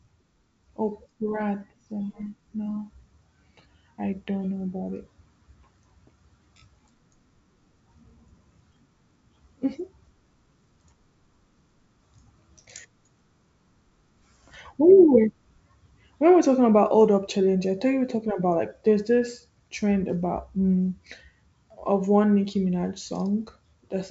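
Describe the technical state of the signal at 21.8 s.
At 21.8 s the speech is intact, with no fault; it is carried by 64 kbit/s G.722 wideband telephone coding, so nothing is heard above about 7.7 kHz.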